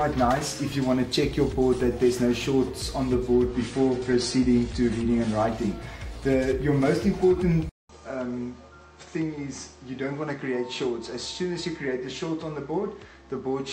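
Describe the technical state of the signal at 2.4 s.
At 2.4 s the signal is intact, with no audible dropout, distortion, glitch or other technical fault.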